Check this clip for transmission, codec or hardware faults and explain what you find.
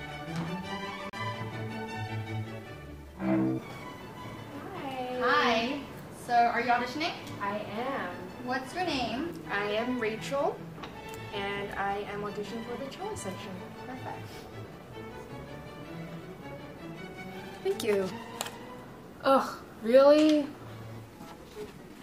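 One playback fault stands out, a CD skip. At 1.10 to 1.13 s the laser jumps tracks; after a mute of roughly 40 ms, the sound resumes elsewhere. On the waveform there is a flat gap with an abrupt discontinuity.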